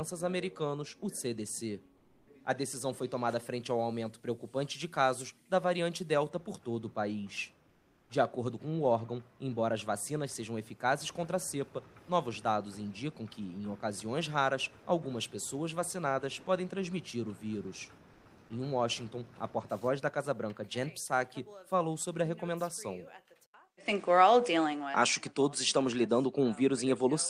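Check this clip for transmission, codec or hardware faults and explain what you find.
Two faults are audible: the background is replaced by synthetic comfort noise in three short pauses, and the input changes to a poorer device near the end.

Comfort noise in place of the background appears at 1.99 to 2.27 s, 7.71 to 8.07 s and 18.15 to 18.23 s. This is likely discontinuous transmission, where the sender goes quiet and the receiver fills the gap with generated noise. The real background, about 32 to 37 dB below the loudest passages, turns into a steady, featureless hiss about 6, 4 and 2 dB quieter. On a spectrogram these stretches show as smooth, textureless bands. On the waveform they show as slightly lower, uniform patches.

The input likely switched to a poorer device at 23.46 s. An 80 ms silence, a flat line on the waveform, marks the switch. After it, nothing appears above 9.8 kHz, which shows as a hard ceiling on the spectrogram. 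The sound turns duller with little change in level, over a new noise floor roughly 55 dB down.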